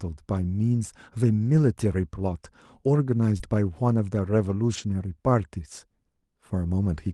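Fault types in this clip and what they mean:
Lost packet rebuilt from error correction: Missing Opus packets were replaced by lower-bitrate copies carried in the following packets, so there is no gap, only rougher, noisier stretches at 1.41–1.59 s (100 ms, consistent with about five packets), 3.40–3.42 s and 4.74–4.80 s.
Short concealed packet loss: Around 3.37–3.42 s, about 20 ms of the call arrived too late and was filled by extending the preceding sound for 21 ms, heard as a brief smear before the signal blends back into the received audio over the WebRTC path.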